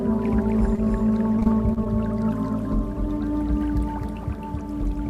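A second copy of the whole audio runs throughout, trailing the original by roughly 300 ms at about 5 dB lower. This doubled audio track is most likely caused by the signal being picked up twice, once through a slower path. The copy is full-band and dry, with no decay or room colour. On a spectrogram every onset and its harmonic pattern appears twice, the fainter version shifted right by the same fixed interval. On the waveform each transient has a matching smaller echo that same distance later. At 0.75 to 0.79 s there is a short stall from a late packet. A sound is held for about 20 ms longer than it should be, and then the audio resumes exactly where it left off with nothing skipped. The receiver ran out of buffered audio and stretched the last fragment until the packet arrived, pushing everything after it about 20 ms later. A spectrogram shows a brief flat, smeared band where the spectrum freezes. 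The waveform shows a short stretch of near-periodic repetition. From 1.39 to 1.87 s, repeated packet loss gives a choppy quality with pieces missing. There are four holes, the longest about 27 ms. About 81 ms in total is patched by extending the preceding sound, and about 60 ms is simply gone. Because the losses come so close together, the patches never fully recover before the next dropout. On a spectrogram this stretch shows repeated vertical seams and frozen, buzzy harmonic streaks. The waveform shows irregular repeated cycles and small discontinuities across the half-second.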